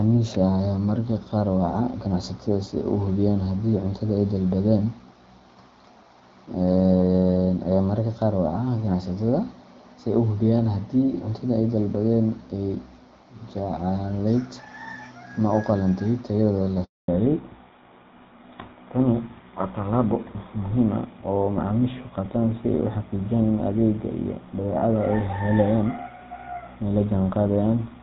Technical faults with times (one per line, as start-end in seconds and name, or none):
16.84-17.08 handover gap
17.08-28.02 fallback to narrowband